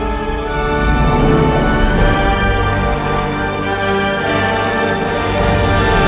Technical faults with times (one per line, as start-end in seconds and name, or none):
none